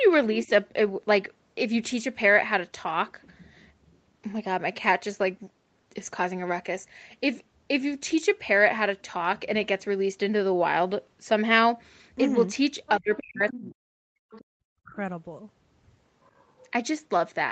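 From 0.33 to 0.49 s a faint second voice sits under the speech, about 20 dB down. This is the other side's voice leaking through, likely from the far end's loudspeaker audio not fully removed by the echo canceller. Overlapping its tail, from 0.46 to 0.5 s, the talker's own voice drops by around 10 dB. That is speech suppressed in double talk, where the canceller likely turned everything down while both sides were active.

The leak adds a separate voice on top. Suppression removes level from the main voice instead, so what you hear is a hole rather than an extra layer. The longer suppression runs from 12.96 to 14.22 s. For about a second the speech sinks by as much as 40 dB, close to silence.

Inside that stretch the leaking voice surfaces briefly at 13.16 to 13.23 s and 13.49 to 13.6 s, about 15 dB under the speech. It returns at 14.31 to 14.44 s, about 25 dB down. A second deep cut follows from 14.59 to 14.97 s, roughly 0.3 s with drops near 40 dB. 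The last leak, from 16.24 to 16.69 s, is barely audible at about 35 dB below the speech, within the 8 kHz band of the Opus call path.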